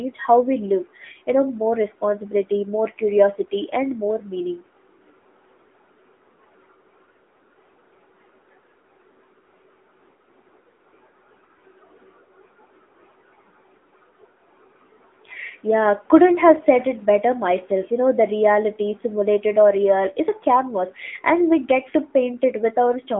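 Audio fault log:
throughout, AMR narrowband mobile codec: the speech is confined to a telephone band of roughly 200 Hz to 3.5 kHz, with nothing at all above 3.8 kHz, so sibilants and breathiness are dulled. The codec rebuilds the voice from a vocal-tract model excited by a few pulses every 5 ms within 20 ms frames, and its coding damage is plainly audible as a synthetic, buzzy edge, which fits the 10.2 kbps AMR-NB mode.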